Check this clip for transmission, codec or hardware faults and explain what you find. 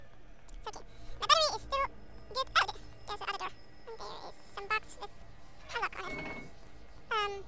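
There's one fault, and it runs through the whole clip: a wrong sample rate. Everything plays at exactly twice its proper speed and sits a full octave high, 12 semitones up, so the sound comes across squeaky and rushed from start to finish. That's what happens when samples get clocked out faster than they were captured, with no rate conversion in between. Speed and pitch rise together by the same ratio, and a clean 2x fits audio recorded at 8 kHz but played back at 16 kHz.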